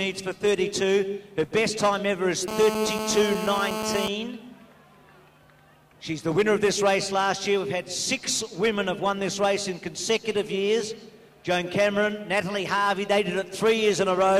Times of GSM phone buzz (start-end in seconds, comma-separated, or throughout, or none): 2.48-4.08